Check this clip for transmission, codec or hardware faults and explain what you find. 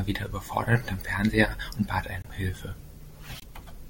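The speech has two brief glitches, at 2.22–2.26 s and 3.40–3.44 s. Their likely cause is a broken MP3 bit reservoir: frames lost from the stream (each glitch spans under two frames, which fits 24 ms MP3 frames) leave the following frame decoding borrowed bits from the wrong data. Each time, the audio skips forward with a 40 ms corrupted stretch.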